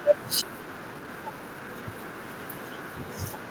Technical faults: skip ahead; jitter buffer speed-up

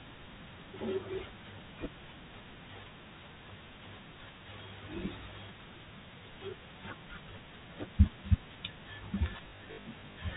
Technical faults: packet loss with last packet repeated

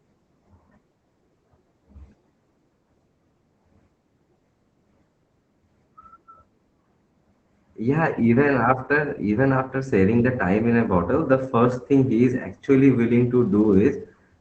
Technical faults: Opus voice compression

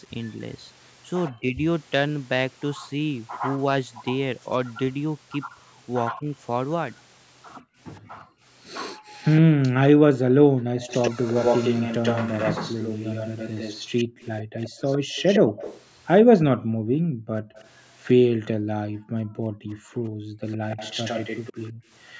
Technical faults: echo leak; speech suppressed in double talk; background gated by the echo canceller

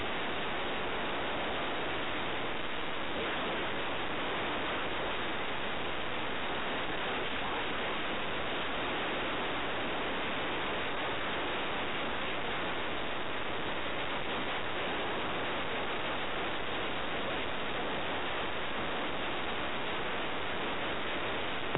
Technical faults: speech suppressed in double talk

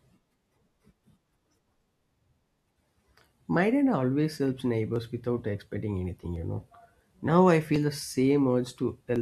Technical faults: clock drift buffer slips

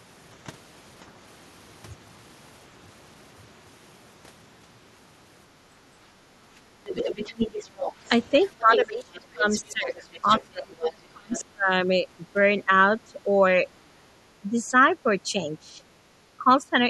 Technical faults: background gated by the echo canceller; other side's voice leaking through; speech suppressed in double talk

